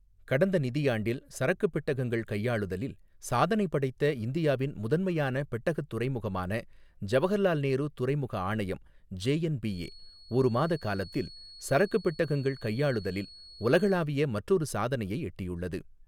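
A feedback whistle runs from 9.63 to 14.08 s, a thin, single-pitch 4.4 kHz tone well beneath the speech that slowly swells and fades, likely from a loudspeaker-to-microphone loop held just short of runaway.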